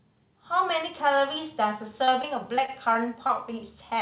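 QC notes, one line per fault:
2.04–3.31 s, repeated packet loss (robotic sound): six packets were lost or arrived late in quick succession, the longest gap 32 ms. Each was patched by extending the previous audio, so about 9% of this stretch is concealed, making it sound choppy with pieces missing.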